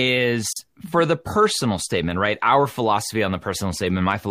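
Speech that drops out abruptly at 0.53 s for about 36 ms, then resumes exactly where it stopped with "for the personal statement", the edges softened. It is a gap at a join of encoded pieces: separately encoded segments were joined untrimmed, leaving encoder delay and final-frame padding as silence.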